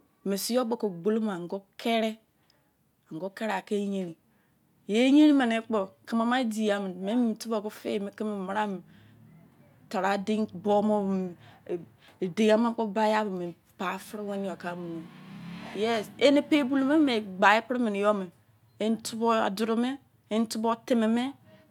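Speech recording, no technical faults detected anywhere in the clip.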